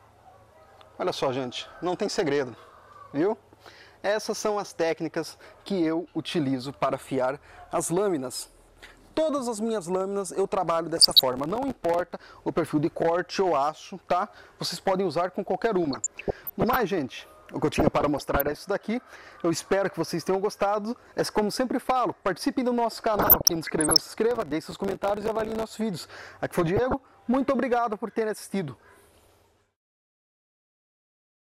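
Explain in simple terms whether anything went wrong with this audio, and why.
Two separate things went wrong. First, the digital radio reception weakened at times, and some corrupted data slipped past the error correction into the audio. That is DAB burbling: individual frequency bands briefly jump in level or pick up short blips of noise. It happens from 10.95 to 11.22 s, 15.83 to 16.80 s, 17.63 to 18.58 s, 23.14 to 24.03 s and 26.58 to 27.14 s.

Second, the playback processor fell behind and missed its deadlines for filling many tiny audio chunks again and again over a short stretch, each only a few milliseconds long. This is processor overload crackle. Every missed chunk becomes a short hole of silence with sharp edges, and these holes run together into a gritty, crackling tear over the sound. It lasts from 11.33 to 12.19 s, with roughly thirty gaps, and again, longer and denser, from 24.31 to 25.70 s.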